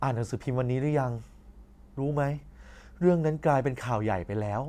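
There are no technical faults to describe in time order anywhere in this speech recording.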